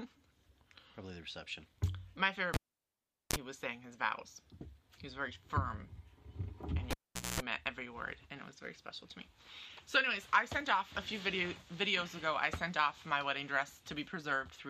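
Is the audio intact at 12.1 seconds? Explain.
Yes, the audio at 12.1 seconds plays through intact, with no dropout, click, distortion or other fault at that point.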